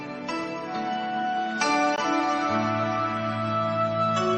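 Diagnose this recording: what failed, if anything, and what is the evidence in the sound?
A gap between stream segments occurs at the playback stage. At 1.96 s the sound drops to silence for about 18 ms, with hard edges on both sides. Two segments' time stamps did not meet, so the player filled the hole with silence. Nothing is missing.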